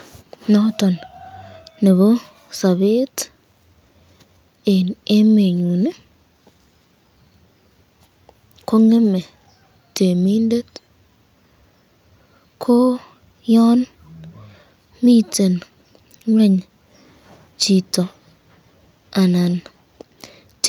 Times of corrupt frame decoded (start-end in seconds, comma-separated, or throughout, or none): none